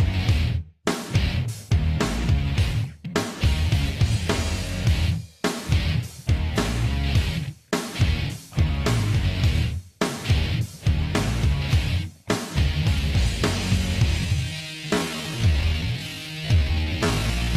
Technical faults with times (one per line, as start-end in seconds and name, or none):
14.17-17.57 time-stretched section